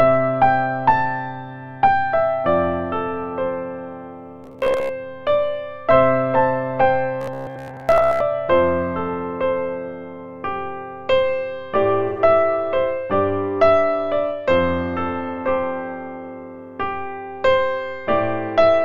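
From 4.44 to 4.91 s and again from 7.21 to 8.20 s, the sound hardens into a rigid, metallic buzz at 66.7 Hz, the robotic sound from repeated short buffers. Audio likely arrived too late, so a 15 ms slice was replayed, covering about half the first stretch and most of the second.

At 12.08 s a brief, smeared, phasey patch of about 85 ms appears. This is AAC frame loss with concealment, a gap that fits two lost frames, filled in by the decoder from the last good spectrum.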